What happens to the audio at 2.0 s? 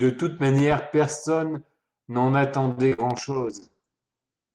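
Nothing goes wrong at 2.0 s: the speech there comes through intact, carried by the ordinary call path with its usual Opus coding and no dropout, glitch or distortion at that moment.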